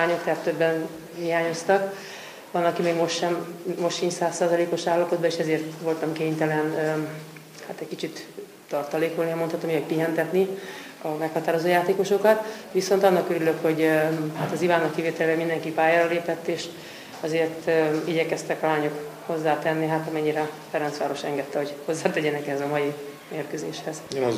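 From 8.19 s to 14.61 s the audio shows crude rate conversion. Samples appear to have been repeated at the nearest position rather than filtered, which fits a change from 32 kHz to 44.1 kHz. Because the two rates form an irregular ratio, the repetition error recurs in a fixed pattern. It creates shifted, inharmonic copies of the sound, about 25 dB below it, heard as a gritty, inharmonic fizz that tracks the louder and brighter passages.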